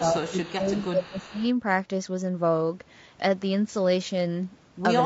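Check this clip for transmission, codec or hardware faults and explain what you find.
Three faults are audible in this speech clip: codec damage throughout, and an early stretch where speech is suppressed while a faint echo leaks in.

Low-delay AAC compression runs throughout, likely AAC-ELD at a bitrate near 32 kbps. Its short frames resolve harmonics poorly, so the voice sounds rough and grainy, with a lowered or synthetic top band.

Speech suppressed in double talk appears from 0.0 to 1.44 s, likely because an echo canceller turned down both talkers at once. The voice dips by up to around 15 dB for about a second in all.

Echo leak appears at 0.28–0.51 s, 0.73–0.87 s and 1.03–1.48 s, likely from a loudspeaker echo the canceller missed. A faint copy trails 338 ms behind, about 25 dB below the speech.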